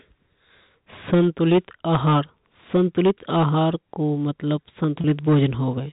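A harsh, gritty fuzz rides on the louder stretches of speech from 1.13 to 2.20 s, again from 2.75 to 3.69 s, and from 4.52 to 5.46 s. This is hard clipping: the level overshoots what the chain can pass by about 9 dB in the first span and about 6 dB in the later two, so the peaks are sliced flat and bright harmonics crowd the top of the narrow telephone band.

Inside that last clipped span, from 5.01 to 5.04 s, the sound briefly holds on a slightly buzzy, frozen tone before moving on. That is packet loss with pitch repetition: about 30 ms of audio went missing, which fits a single lost packet, and the receiver filled the gap by repeating the last pitch cycle.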